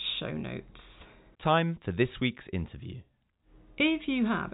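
No technical fault can be heard in this speech recording, which carries the band-limited sound of ordinary G.711 telephone coding with nothing above about 3.8 kHz, consistent with a standard 64 kbps mu-law line.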